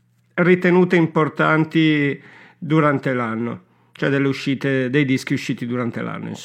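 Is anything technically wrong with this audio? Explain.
No, nothing in this speech recording stood out as technically wrong on listening.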